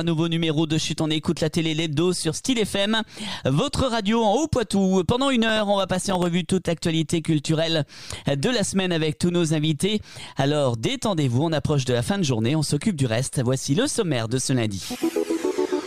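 From 5.49 to 6.26 s the processor falls behind and repeatedly fails to fill its small audio buffers in time, a processor overload crackle. The skips are short, which fits buffers of around a millisecond and a half, and roughly ten of them go unfilled across that stretch. Each miss drops in a sliver of silence with hard edges, so the sound breaks into a gritty crackle that clears once the load eases.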